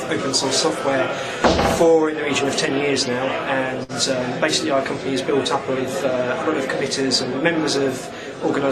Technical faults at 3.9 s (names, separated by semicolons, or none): short stall from a late packet